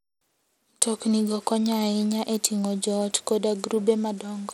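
From start to finish the speech sounds dulled and gritty: the upper treble thins out and flickers in and out, a rough grainy noise clings to the voice, and aliasing rides on the sound. The damage is plainly audible. This points to Bluetooth SBC compression, likely at a bitrate around 96 kbps, where too few bits leave the top sub-bands starved or empty and the remaining bands coarsely quantised.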